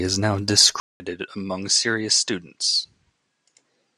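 At 0.8 s the speech cuts out for 200 ms, then returns about 5 dB quieter and duller to the end, with nothing above 10 kHz and a faint new hiss around 50 dB down. The likely cause is the input switched to a poorer, narrower-band device.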